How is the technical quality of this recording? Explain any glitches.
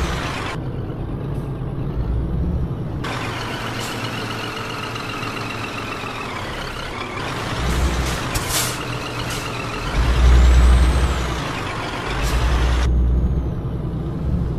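There are two small glitches, both from overlap between stream segments, at about 0.88 s and 4.87 s. They sit almost exactly 4 s apart, which fits segments roughly 4 s long. At each join, two segments' timestamps claimed the same stretch of time, so the player trimmed the overlap even though that sound wasn't actually duplicated. About 13 to 16 ms of audio drops out, the waveform jumps, and you hear a quick click or tiny skip.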